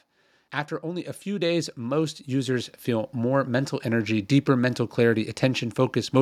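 From 0.8 to 4.37 s, automatic gain rising occurs. The gain control climbs about 10 dB. Speech and background swell together, slowly and evenly.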